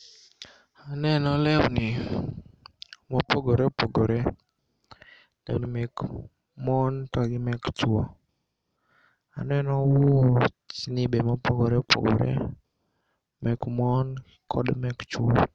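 No technical faults are audible.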